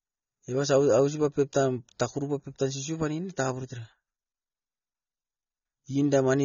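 Speech, carrying AAC compression from start to finish, likely a low-bitrate AAC-LC encode, around 24 kbps by the sound of it. The encoder has discarded everything above 6.9 kHz and starved the remaining bands, so the speech sounds dull and smeared, with plainly audible warbling and fizz on sustained sounds and sibilants.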